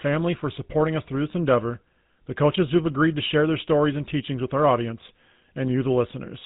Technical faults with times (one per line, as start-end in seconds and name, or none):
0.00-6.46 GSM full-rate codec